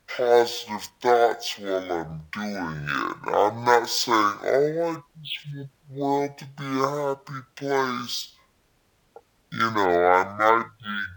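From start to finish it's a stereo read as mono fault: interleaved left-right samples played as one channel, so the speech drags at half speed and sits a full octave low.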